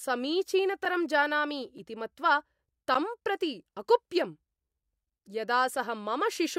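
Three sharp ticks interrupt the speech at 0.85 s, just before "जानामि इति", at 1.78 s and at 2.94 s. Each is a block of digital silence, lasting 5 ms, about 4 ms and 10 ms, where the samples drop abruptly to zero, which points to an output buffer not being filled in time.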